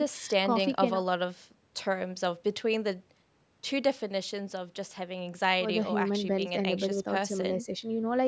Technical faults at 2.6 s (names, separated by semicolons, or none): none